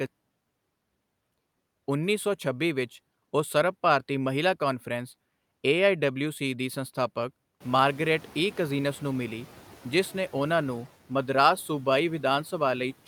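Around 7.5 s the room noise jumps by about 18 dB, and from 7.6 to 9.4 s you can hear the noise suppressor catching up. Its noise estimate was tuned to the quieter background, so the louder noise gets through with little reduction at first, then gradually sinks over about 1.8 s as the estimate adapts. It settles with roughly 4 dB taken off, leaving the room noise about 23 dB under the speech.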